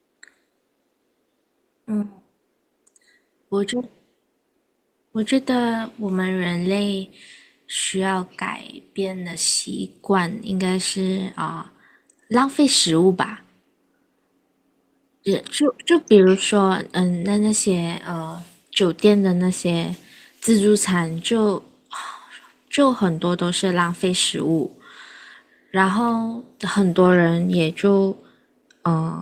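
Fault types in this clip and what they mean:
No faults can be heard in this speech recording.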